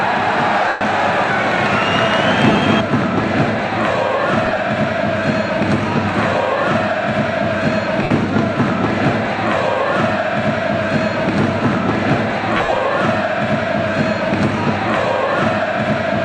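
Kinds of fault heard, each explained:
lost LE Audio frames: Bluetooth LE Audio frames failed to arrive, so the LC3 decoder patched each gap by reusing the last spectrum with random signs, fading it as the gap lengthened. This leaves noisy smears, longest from 0.68 s (about 130 ms) and 12.57 s.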